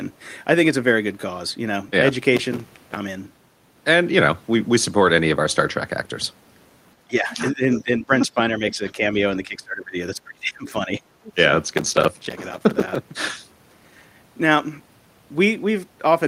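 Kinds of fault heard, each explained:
processor overload crackle: The processor misses deadline after deadline for its small buffers, each a few milliseconds long. Every miss leaves a brief hole of silence. Dozens of them pile up into gritty crackle from 2.37 to 2.96 s and again from 11.68 to 12.96 s.
speech suppressed in double talk: The speech dips and breaks up in pieces from 7.06 to 9.15 s, 9.33 to 11.01 s and 11.19 to 11.32 s. The drops grow deeper each time, ending in a near cut. This is likely an echo canceller ducking the talker during double talk.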